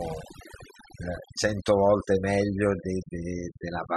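Overdone noise removal runs throughout: frequency bands near the noise estimate are cut hard, leaving near-silent background with twinkling specks.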